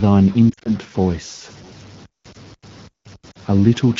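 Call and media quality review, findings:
Stuck bit, whole clip: constant distortion riding on the signal, with noise persisting into pauses. Likely cause is a data line or converter bit held at 0 or 1, flipping about half the samples. Unlike codec damage, it does not track bitrate.

Lost AMR speech frames, 0.50–0.70 s: 100 ms lost, scattered over 160 ms, longest run 40 ms. Also 3.31–3.37 s: 40 ms lost. Audio dips toward near-silence within two frames and returns weak, consistent with AMR-WB concealment on top of light 12.65 kbit/s-type coding. These are localized dropouts, unlike the continuous stuck-bit noise.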